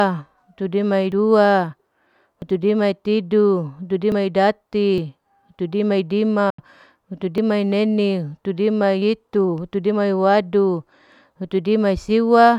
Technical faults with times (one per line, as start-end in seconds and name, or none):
1.12 dropped buffer (overrun)
2.42 dropped buffer (overrun)
4.12 dropped buffer (overrun)
4.98 dropped buffer (overrun)
6.50-6.59 Bluetooth dropout
7.38 dropped buffer (overrun)
9.02 dropped buffer (overrun)